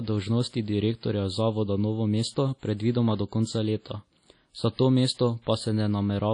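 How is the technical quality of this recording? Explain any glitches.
Throughout the speech the sound is washy and ringing, with a hiss that swells with each syllable and nothing above 10.1 kHz. That smearing likely comes from WMA compression at a low rate, around 32 kbps.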